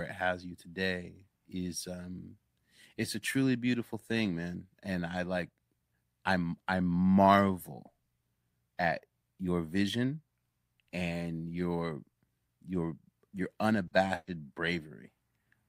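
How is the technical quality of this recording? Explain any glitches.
Two network dropouts mar the speech near the end, both in the final two seconds.

Short concealed packet loss, 13.87 to 13.94 s: about 40 ms of audio arrived too late, so the decoder extended the preceding sound to cover the hole before rejoining the real signal, leaving a brief smear where that fragment of speech is simply absent.

Burst of packet loss, 14.15 to 14.30 s: a longer run of data went missing, about 120 ms in all. The receiver stretched the last sound across roughly 120 ms, fading it down into 20 ms of silence, so a held buzz or decaying hiss replaces the lost speech before it resumes further on.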